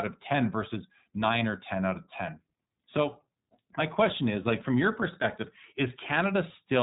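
From start to finish, the speech carries the iLBC codec's signature. Nothing comes through above about 3.8 kHz, so the audio sounds narrowband and muffled. Sibilants lose their edge. Each 20 ms frame is coded on its own, without drawing on the frame before. The damage is plainly audible as a rough, slightly synthetic texture across the whole clip. The band limit and that roughness point to the 15.2 kbps iLBC mode.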